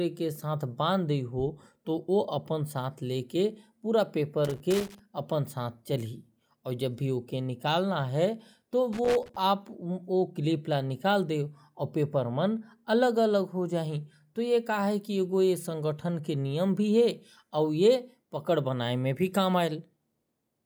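At 4.45 to 4.99 s, and again from 8.93 to 9.36 s, the speech breaks into loose connector crackle: a worn or dirty contact rapidly making and breaking, chopping the signal, heard as irregular bursts of scratchy crackle about half a second long.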